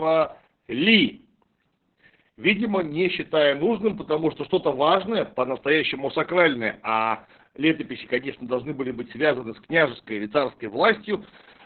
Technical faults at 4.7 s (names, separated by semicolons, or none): Opus voice compression